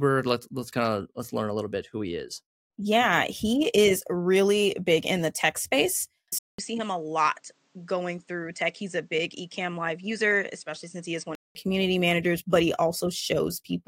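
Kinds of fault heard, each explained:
Input switched to a poorer device: After "in the tech space", at about 6.39 s, the sound cuts out for about 200 ms. It then returns duller and narrower. Nothing above 8.8 kHz gets through, and the level drops by around 5 dB. A faint new background noise sits well below the speech. This was likely caused by the input moving to a lower-grade microphone. Full clarity returns at 11.55 s, before "community managers but he".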